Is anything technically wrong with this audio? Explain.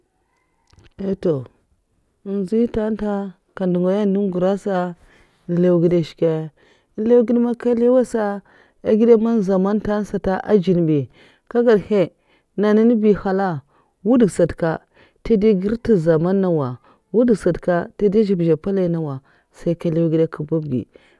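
No, nothing technically wrong can be heard here.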